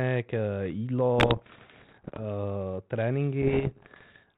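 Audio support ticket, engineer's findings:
Bit errors on an ADPCM link, 1.18 to 2.21 s: pops and rough bursts with brief level jumps in the speech. Each flipped bit throws off the decoder's step size and predictor, so the damage rings on for milliseconds rather than dropping out like packet loss.

Same fault, 3.42 to 4.17 s: pop-and-rasp texture, error rate on the order of one to two percent. Underlying band-limited G.726 coding, consistent with 32 kbit/s, shows only light coding damage between bursts, so codec bitrate is not the cause.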